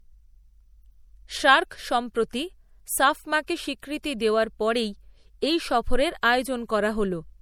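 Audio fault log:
Throughout, low-bitrate audio saved at a high bitrate: the speech has the smeary, watery texture of a lean MP3, pointing to about 64 kbit/s, inside a far bigger file. This is likely a re-save, and the extra bits can't restore what the first pass discarded.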